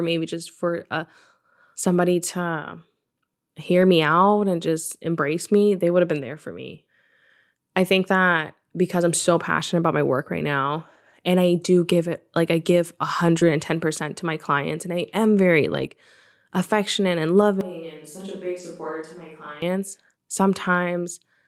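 At 3.81 to 3.83 s, just before "me out and just", a lost packet rebuilt from error correction leaves no gap: the next packet carried a low-bitrate copy of the missing 20 ms, and the decoder played that copy. The result is a brief grainy, noisier patch rather than silence. The same 20 ms roughening returns at 6.17 to 6.19 s, between "they would have been" and "there for me", and again at 8.47 to 8.49 s. These are coarse rather than smeared, which separates them from concealment.

At 13.39 to 13.43 s, right after "it like I give", comes a short concealed packet loss. About 20 ms arrived too late, and the receiver stretched the preceding sound over roughly 18 ms before blending back in. The effect is a small wobble or smear, not a grainy texture. Within that window, 13.41 to 13.43 s was also rebuilt from the error-correction copy.

A longer rebuilt stretch runs from 15.73 to 15.87 s. It is 80 ms of rough, noisy sound, which fits four packets being replaced by their low-bitrate copies. 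A further 20 ms rebuild follows at 17.41 to 17.43 s.

From 17.61 to 19.62 s the sound abruptly turns hollow and roomy. It loses bass and drops around 10 dB, with room noise about 35 dB below the speech. This is likely a switch to a distant microphone. The sudden change in and back out, together with the change in room character, distinguishes it from a simple gain drop. Inside this stretch, at 18.59 to 18.61 s, one more 20 ms packet was rebuilt from error correction.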